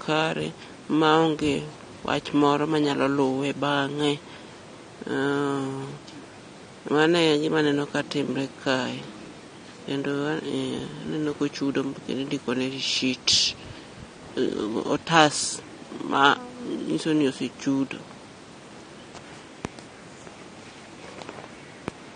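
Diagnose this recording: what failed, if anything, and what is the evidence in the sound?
The codec stage failed: the speech was most likely squeezed through AAC compression at a low bitrate, consistent with AAC-LC at around 32 kbps. Throughout the recording, nothing is present above 9.7 kHz, so the encoder has cut the top of the band to save bits. The remaining band is coarsely quantised, leaving sibilants fizzy and sustained vowels with a warbling, smeared texture. The codec damage is plainly audible from start to finish.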